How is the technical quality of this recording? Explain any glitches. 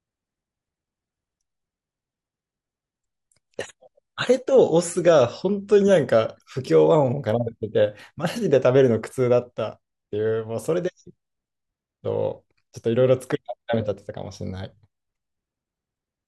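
The speech has one fault, limited to the opening. Adaptive stream starting at a low bitrate, 0 to 6.0 s: the player began on a lean version, dull above 11.3 kHz and artefact-heavy, then stepped up seamlessly.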